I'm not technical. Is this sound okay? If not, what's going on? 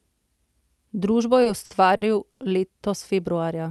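No. Between about 1.43 and 2.42 s the speech has repeated stalls (stutter). The call's audio arrived late or too slowly, so the receiving end ran out of sound four times. Each time it stretched the last bit of sound to cover the wait, the longest wait being about 90 ms and about 210 ms in total. Nothing is lost, but that stretch drags and stutters. The sound is carried over a call link whose highs stop around 12 kHz.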